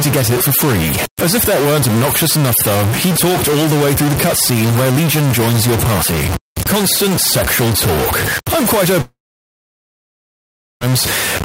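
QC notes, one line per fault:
Throughout: stuck bit. Distortion rides on the speech, and the pauses are filled with noise instead of going quiet. This is likely from one data bit held at a fixed value by a faulty line or converter, which offsets roughly half the samples by that bit's weight and flips with the sign of small values.
9.01–10.84 s: long network dropout. Just after "sexual talk I'm quite", the last sound trails off as a short fading buzz or hiss, followed by about 1.65 s of near silence. Speech returns at 10.84 s with about 1.8 s of audio missing, likely because packets stopped arriving and the receiver's concealment ran out.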